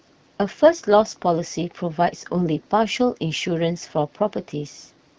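Nothing here counts as a technical fault; the speech simply comes through an AMR wideband (HD Voice) link at 12.65 kbit/s, with only the light colouring that codec leaves at that rate.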